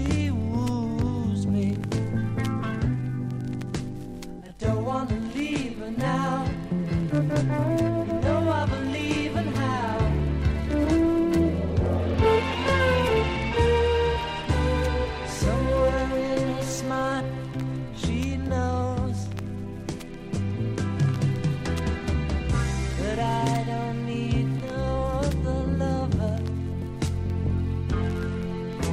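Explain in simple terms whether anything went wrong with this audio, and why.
Five brief glitches at 12.14, 17.19, 20.98, 24.58 and 26.82 seconds, where the sound jumps slightly ahead. These are compressed frames skipped: small chunks of the file were missing or rejected as damaged, so playback leapt past them.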